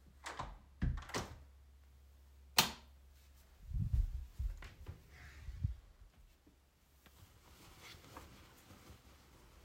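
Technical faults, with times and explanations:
Nothing stood out as a technical fault on listening to this recording.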